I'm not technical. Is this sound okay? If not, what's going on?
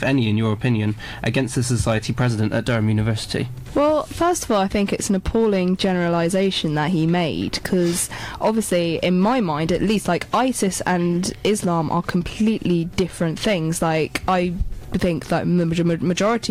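No, there's hard clipping all the way through: the loudest moments are too big to fit, so their tops get flattened, adding a gritty crackle whenever things peak.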